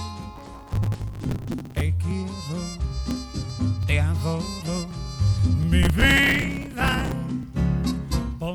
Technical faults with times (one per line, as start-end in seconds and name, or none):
0.36-1.81 processor overload crackle
5.83-7.12 processor overload crackle